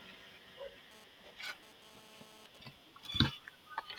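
Speech clip: from 0.91 to 2.58 s a harsh, raspy 217 Hz buzz rich in harmonics sits about 17 dB below the voice. This is GSM phone buzz from a nearby phone transferring data, whose radio bursts the audio circuitry rectifies.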